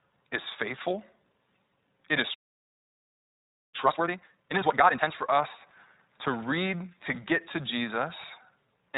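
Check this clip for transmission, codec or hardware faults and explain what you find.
Three faults are audible. The speech runs through the iLBC codec throughout, it stops dead once, and then it plays hurried for a stretch while the player catches up.

The iLBC codec damage is plainly audible for the whole clip. Nothing above about 3.8 kHz survives, so the speech sounds narrowband and thin, with a rough, slightly synthetic texture. The roughness fits 20 ms frames, each coded on its own at a low rate, near 15 kbps. The damage is constant and tied to the codec, not to any single event, which sets it apart from the bursty errors of lost packets.

A playback stall runs from 2.34 s to 3.75 s. The speech cuts out mid-flow and stays silent for about 1.4 s. The likely cause is that the player ran out of buffered data. The sound then resumes with no repeated fragment, which separates it from a loop.

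Time-compressed catch-up follows from 3.75 s to 5.13 s. The speech plays at double speed while pitch stays normal. Small pieces are being cut out and cross-faded to clear the backlog. The unchanged pitch is what distinguishes it from a simple sped-up resample.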